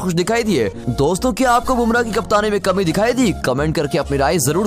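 No technical faults can be heard in this audio.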